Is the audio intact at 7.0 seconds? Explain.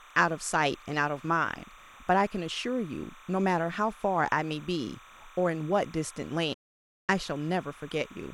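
No. At 7.0 s the audio sits inside a digital broadcast dropout from 6.54 to 7.10 s, with a fade of about 8 ms. The receiver lost valid frames and muted. Unlike a tape dropout, the sound does not thin out. It vanishes outright, which fits roughly 17 lost frames.

Timecode bleed runs under the sound throughout. It is a chirping warble switching between about 1 and 2 kHz, roughly 25 dB down, consistent with 30-frame code leaking from a neighbouring track. Hum, by contrast, stays at one steady pitch.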